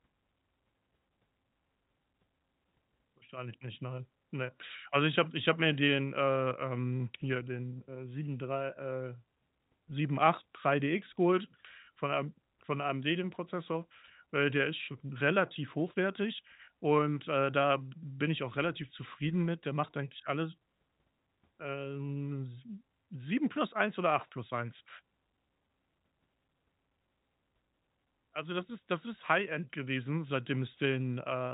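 Nothing goes wrong anywhere in this speech recording, which has the narrow sound of G.711 telephone coding, with nothing above roughly 3.8 kHz coming through.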